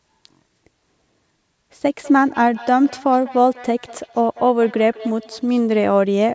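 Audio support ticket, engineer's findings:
Speech repeating back on itself, 1.98–5.93 s, every fifth of a second or so, each pass thinner and more ringing, peaking about 19 dB under the talker. Feedback echo between two devices: second endpoint replaying this mic, re-captured; local echo canceller can't remove it. Separately, audio tops out at 8 kHz with low bass trimmed, consistent with call microphone processing.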